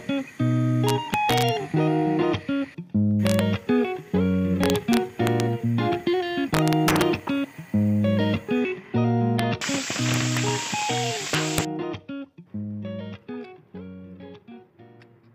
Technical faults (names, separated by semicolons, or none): integer overflow